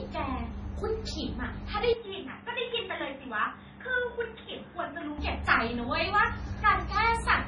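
Heavy MP3 compression, likely at a starved bitrate, runs through the whole of this speech recording. The encoder has cut everything above 10.5 kHz and dropped weak frequency lines that flicker between frames. The result is a watery, swirling texture, with chirpy, metallic sibilants and softened consonant attacks, which fits a bitrate around 24 kbps. From 1.93 s to 5.18 s the input was likely switched to a poorer device, such as another microphone or a headset call profile. The changeover happens with no gap. For that stretch the band stops at 3.8 kHz, so the voice turns dull and boxy. The level falls by about 5 dB, and a faint new noise floor appears well beneath the signal. At 5.18 s the fuller tone snaps back.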